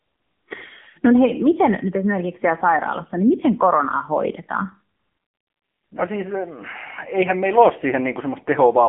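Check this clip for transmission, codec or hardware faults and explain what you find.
The audio has one fault, present throughout: the AMR narrowband mobile codec. It confines the speech to 200 Hz to 3.4 kHz, with nothing above 3.5 kHz. The codec rebuilds the speech from a vocal-tract model driven by sparse pulses. The sound is plainly buzzy and synthetic, which fits a low mode near 8 kbps.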